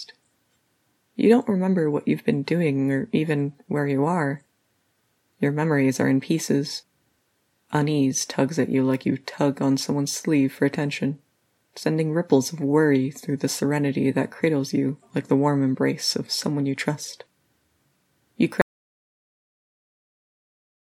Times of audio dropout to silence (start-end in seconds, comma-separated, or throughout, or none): 18.61-20.83